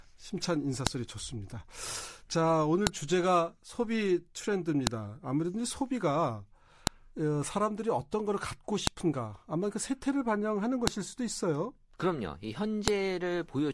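Speech with a file header played as audio: sharp clicks at 0.87, 2.87, 4.87, 6.87, 8.87, 10.87 and 12.88 s, every 2.0 s, where joined pieces' headers play as samples.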